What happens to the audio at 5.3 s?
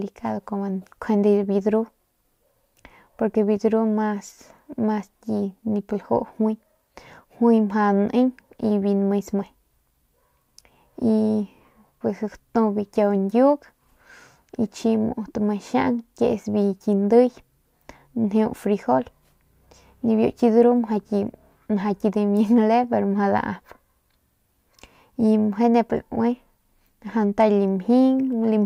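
Nothing goes wrong at 5.3 s; the speech there plays through intact, with no dropout, click, distortion or other fault.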